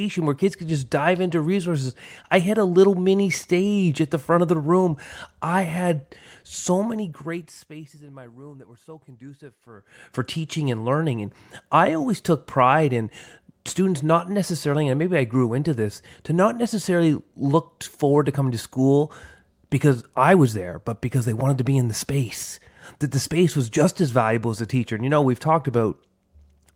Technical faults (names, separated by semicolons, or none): none